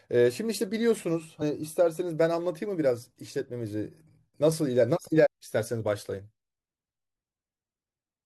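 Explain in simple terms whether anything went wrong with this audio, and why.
Damaged data in a compressed stream, at 1.41 s and again from 5.25 to 5.27 s: corrupted bytes confuse the decoder, which briefly loses its place in the speech and produces a short blip.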